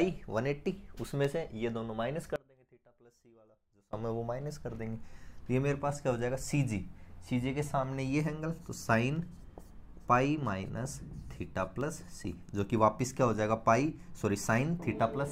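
From 2.36 to 3.93 s the sound drops out abruptly, leaving a faint residue roughly 25 dB down; likely a signal loss with the downstream path still live.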